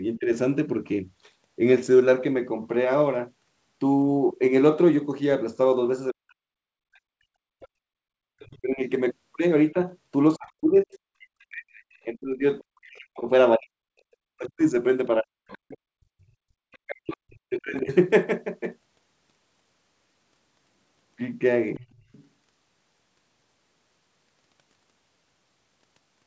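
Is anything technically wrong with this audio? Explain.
Yes. Two faults occur.

Speech suppressed in double talk occurs at 0.17 to 0.31 s and from 6.12 to 17.9 s. The speech dips by about 15 dB early on, and by up to about 40 dB later. The likely cause is an echo canceller turning down both sides while both talk at once.

The other side's voice leaking through is heard at 6.3 to 8.59 s, 11.93 to 11.98 s, 15.48 to 17.94 s and 21.76 to 22.27 s. It is faint, about 25 to 40 dB below the speech. The likely cause is an echo canceller leaving loudspeaker sound in the microphone.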